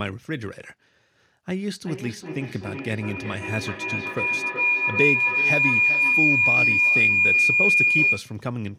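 Feedback howl runs from 1.51 to 8.42 s in this speech clip, peaking about 7 dB above the speech. A microphone and loudspeaker share a room and call, so each trip round the loop adds gain, narrowing to a tone near 2 kHz that pulses roughly every 0.4 s.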